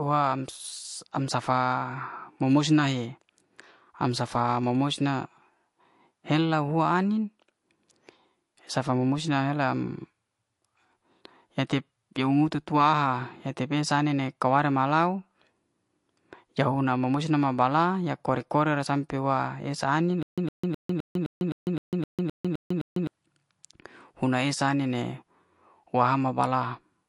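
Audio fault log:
throughout MP3 compression: nothing above 11.3 kHz, with watery, swirling highs, which fits a likely low-bitrate encoder, around 48 kbps, cutting treble and dropping weak frequency lines.
20.23–23.07 s stutter with silent gaps: after "esa anin", a 110 ms burst repeats 11 times between 149 ms silences, likely a stalled stream replaying its last fragment.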